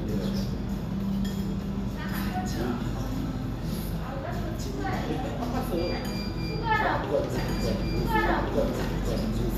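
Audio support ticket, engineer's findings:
Doubled audio track from 7.38 s to end: full-band second copy about 1.5 s behind, roughly equal level, cutting in abruptly. Likely a slower second capture path or misaligned edit. Unlike echo: single copy, no decay, no room colour.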